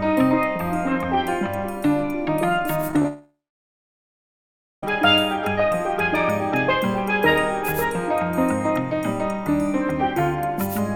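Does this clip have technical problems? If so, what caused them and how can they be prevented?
Yes. From 2.81 to 3.05 s there is repeated packet loss, giving a robotic sound. Five short holes, the longest 26 ms, were each patched by stretching the last sound. About 29% of that span is filled-in audio, so it sounds choppy. Forward error correction and a stable, uncongested connection would prevent it.

From 3.07 to 4.83 s, the audio stops. The last sound trails off briefly, then about 1.5 s of silence follows before the audio resumes with that stretch missing. A long network dropout is the likely cause. A wired or more reliable link would prevent it.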